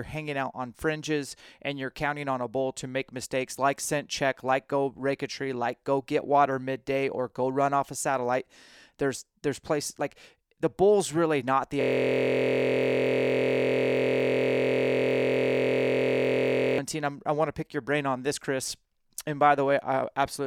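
From 11.81 s to 16.78 s, just after "bull's really not the", the speech collapses into a steady, mechanical buzz pitched at about 43 Hz. It holds for roughly five seconds before the speech resumes with "I'm i want to". This is a system hang loop. The computer or its audio driver stalled, and the sound hardware kept replaying the same 23.22 ms chunk over two hundred times. The loop length fits a 1024-sample ring buffer.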